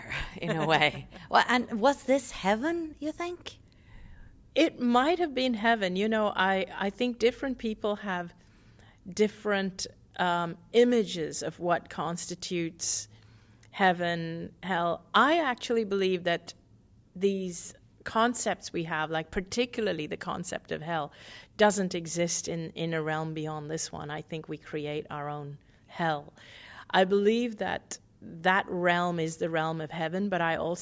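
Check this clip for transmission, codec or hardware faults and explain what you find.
No transmission, codec or hardware faults.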